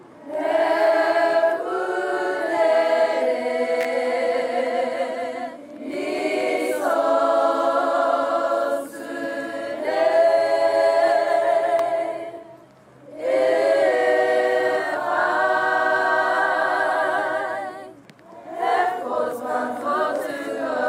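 At 3.81 to 3.85 s and again at 11.79 s, sharp snaps sit on top of the sound with nothing missing underneath, the mark of an electrical switching spike, likely an arc from a nearby switch or motor picked up by the line. At 6.19 s the sound skips ahead by a few milliseconds with no gap, which points to a dropped buffer (overrun): samples likely overwritten before being read, then the edges spliced together.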